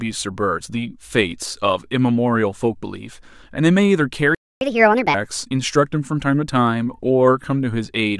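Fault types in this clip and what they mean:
playback stall: output goes silent from 4.35 to 4.61 s, about 265 ms, a flat gap in the waveform; likely the player ran short of data.
catch-up at higher speed: from 4.61 to 5.14 s the speech runs 1.5 times fast, pitch up roughly seven semitones; spectrogram harmonics shift upward, then settle back.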